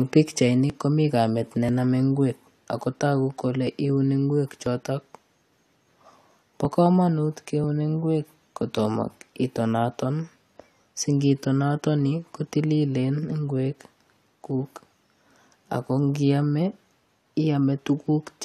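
At 0.70 s and again at 4.66 s there's a tiny skip in the speech, where the waveform suddenly jumps. That's overlap between stream segments. The audio comes in 1-second segments, and at these two joins the time stamps of neighbouring segments overlapped. The player trimmed the overlap as if it were duplicated material, so a sliver of real sound was dropped, about 13 ms the first time and 18 ms the second, leaving a hard splice.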